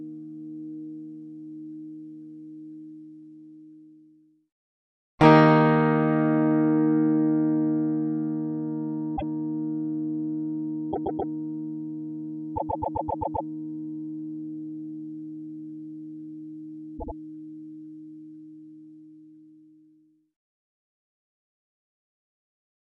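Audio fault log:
9.16–9.31 s, 10.91–11.30 s, 12.55–13.47 s, 16.97–17.13 s: repeated frames. A stutter: a 157 ms block plays twice, 131 ms four times, 131 ms eight times, 78 ms three times. Compressed frames were duplicated and decoded again, lengthening the audio by about 1.6 s.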